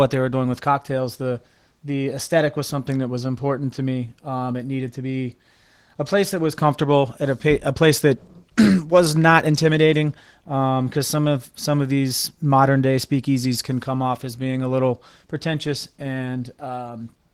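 From start to finish the speech carries plainly audible Opus voice compression. It sounds like hybrid mode, with SILK's linear-prediction coding below 8 kHz and a CELT layer above it, and the full band is kept. The coarse excitation coding fits a rate around 16 kbps.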